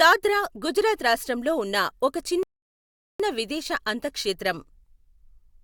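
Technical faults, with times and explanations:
2.43–3.20 s, rebuffering stall: right after "గుజరాత్ రాష్ట్రంలో ఉన్న ఒక", the speech drops into dead silence for about 0.77 s, then picks up at exactly the syllable where it broke off. The player's buffer of downloaded audio ran dry, so playback halted until more data arrived. No speech is skipped or repeated. The pause is inserted into the timeline, which is why the sentence resumes seamlessly but late.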